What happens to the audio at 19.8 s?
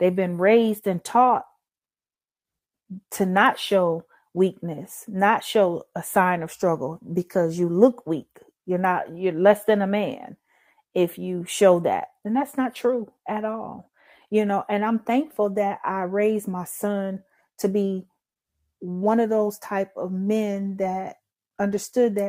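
Nothing goes wrong at 19.8 s: the speech runs through that moment intact, with no dropout, click or other fault to be heard.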